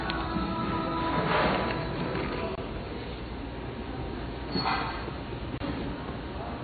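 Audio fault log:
Throughout, MP3 compression: nothing above 4.6 kHz, with watery, swirling texture and smeared attacks, likely from heavy MP3 encoding at a low bitrate around 24 kbps. Unlike plain low-pass filtering, it adds frame-to-frame swirl.
2.55–2.58 s and 5.58–5.60 s, gap between chunks: 25 ms hard-edged silent holes spaced about 3 s apart. Sound resumes where it stopped rather than skipping ahead, which points to chunk joins rather than dropouts.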